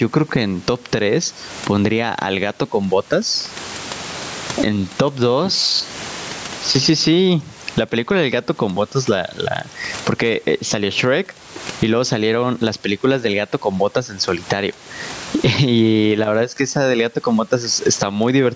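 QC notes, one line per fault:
Throughout, gain pumping: the room noise sits about 35 dB under the speech, and the gain swings around 20 dB, squashing loud and soft parts closer in level. It's likely mic gain set far too high, with a fast limiter yanking it down.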